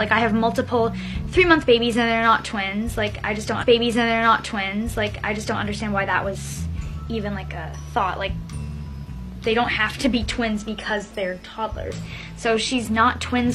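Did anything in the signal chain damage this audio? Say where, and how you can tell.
Yes, at the playback stage. From 3.58 s to 5.58 s you get a stream segment repeated: about 2.0 s of the audio plays a second time, with a small blip where it jumps back. The player fetched or queued that same chunk twice and played both copies.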